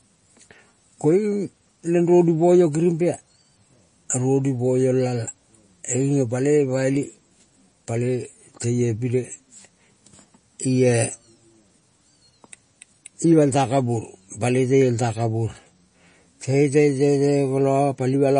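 From start to finish the speech has plainly audible MP3 compression damage, likely from a low-bitrate encode around 32 kbps: nothing survives above 9.8 kHz, so the top end sounds dull. Weak detail flickers between frames, giving a watery, swirly texture and smeared consonant attacks.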